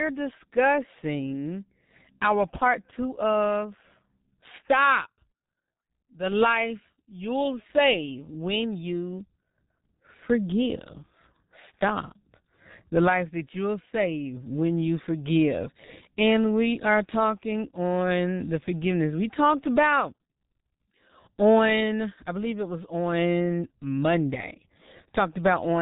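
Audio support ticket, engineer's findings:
G.723.1 codec artefacts throughout the speech. Muffled, hoarse, consonants smeared; nothing above 3.8 kHz. Coarse 30 ms frames, slow voice-model updates, heavy damage, fits roughly 6.3 kbit/s.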